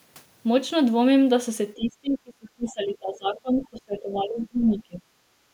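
Speech suppressed in double talk runs from 1.76 to 5.03 s. Across roughly three seconds of that span, the talker's level sinks, at its deepest by something like 25 dB. This is likely the echo canceller reacting to both sides talking at once. Unable to tell the talker apart from the loudspeaker echo, it pulled the whole microphone signal down rather than only the echo.

Other side's voice leaking through appears at 2.67 to 2.71 s and again at 4.42 to 4.46 s. Each is a brief scrap of a second voice, only about 40 ms long, sitting around 30 dB below the talker's speech. The likely cause is loudspeaker playback of the far end reaching the microphone and slipping past the echo canceller, so these fragments survive as faint remnants of the other side.

Background gated by the echo canceller occurs from 5.31 to 5.53 s, where the room sound dips by about 7 dB for roughly 200 ms. With the loudspeaker active, the canceller clamped down on the microphone, and the ambient bed under the signal sank. 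The dip lasts only as long as the canceller holds its grip, and it continues to the end of the clip.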